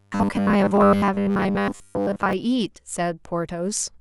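Audio likely arrived too seldom from about 0.01 to 2.33 s of this speech clip, so the same short buffer was replayed over most of that stretch while real audio was skipped, giving robotic sound from repeated short buffers: a rigid 100 Hz metallic buzz, which fits a 10 ms buffer.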